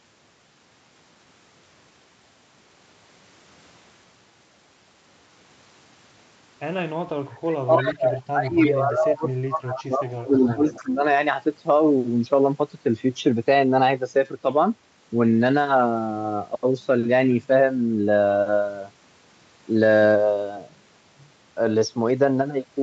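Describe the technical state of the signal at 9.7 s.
At 9.7 s the speech sits inside a stretch of speech suppressed in double talk (7.65 to 11.01 s), likely an echo canceller ducking its own talker along with the loudspeaker echo; the waveform sags by up to about 30 dB. Overlapping it, an echo leak from 9.70 to 9.84 s returns a copy delayed 317 ms, likely loudspeaker pickup the canceller missed, showing as a repeated trace about 10 dB down.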